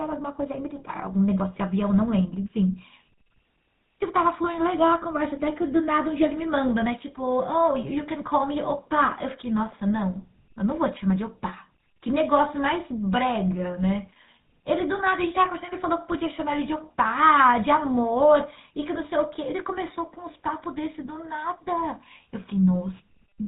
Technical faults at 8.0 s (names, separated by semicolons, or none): GSM full-rate codec